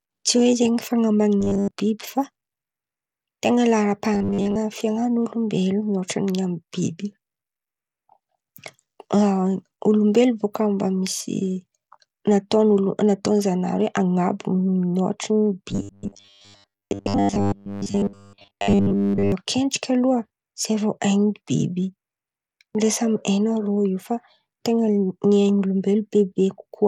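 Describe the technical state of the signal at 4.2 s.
At 4.2 s the signal sits inside a stretch of robotic sound from repeated short buffers, running from 4.15 to 4.57 s. New audio was arriving too slowly, so playback kept filling the gaps by looping the most recent fragment while most of the real material in that window was dropped. The loop lays a rigid buzz at 100 Hz over the speech, which fits a repeated buffer about 10 ms long, and the result is a flat, metallic drone that only loosely tracks the speech.

Underneath that, the whole clip carries Bluetooth SBC compression, likely at a low bit rate, with the coarseness suggesting something near 96 kbps. With so few bits to share across its sub-bands, the codec starves the upper bands and quantises the rest roughly. The damage is plainly audible: the treble thins and flickers, and a gritty, grainy texture rides on the speech at this moment as everywhere else.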